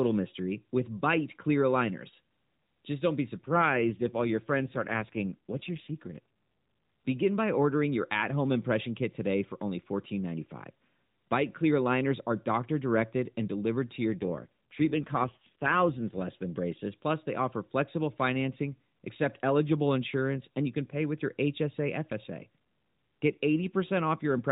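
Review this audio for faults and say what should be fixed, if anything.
The speech turns rougher and more synthetic from 3.36 to 6.19 s and again from 14.14 to 16.22 s, with no gap and no loss of band. These are AMR rate drops: the codec steps down from its normal 12.2 kbps mode, most likely to the 5.9 kbps mode, spending fewer bits on the vocal-tract model. Keeping radio link quality up, or capping how far the rate may fall, would prevent it.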